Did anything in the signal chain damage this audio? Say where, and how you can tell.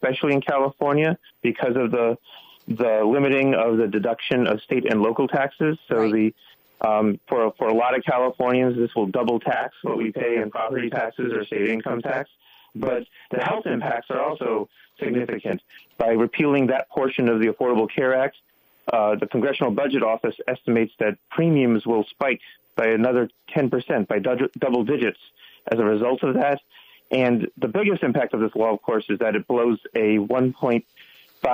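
Yes. Channel delay (doubling) from 9.53 to 15.53 s: a second copy of the sound trails the first by 40 ms at equal level, heard as a doubled slap. One channel ran late by a long buffer at the driver or buffer stage, then both were summed to mono.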